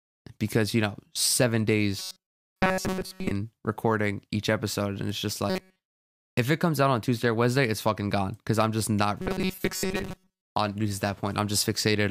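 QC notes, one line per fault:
1.99–3.31 s, 5.50–5.84 s, 9.22–10.55 s: robotic sound from repeated short buffers. Speech becomes a rigid metallic buzz at 188 Hz. This is likely from looping a 5.3 ms buffer, which replaces most of the audio.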